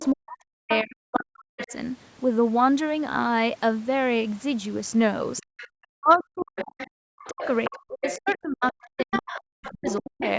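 Right at the start, 0.0 to 0.07 s, there's a faint second voice sitting about 15 dB under the speech. That's the other side's voice leaking through, most likely because the loudspeaker's echo wasn't fully cancelled at the microphone. It comes back in short scraps at 0.69 to 0.84 s, around 10 dB down, and at 1.58 to 1.74 s, around 15 dB down. Then from 5.37 to 10.29 s it runs as one long stretch, roughly 10 dB under the talker.

Overlapping those leaks, the talker's own speech gets chewed up: from 0.11 to 1.72 s and again from 5.42 to 10.21 s, it dips hard, at worst by around 40 dB, and drops out in pieces. In total that's about a second and a half early on and about three seconds later. This is speech suppressed in double talk, likely the echo canceller failing to tell the talker from the echo while both sides talked, so it turned both down. The band stops around 8 kHz from the call microphone processing, which is expected.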